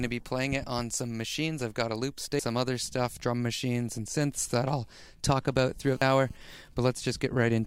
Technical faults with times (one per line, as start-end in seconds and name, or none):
2.39 damaged data in a compressed stream
5.82-6.37 GSM phone buzz
6.02 damaged data in a compressed stream
6.41-7.55 GSM signalling bursts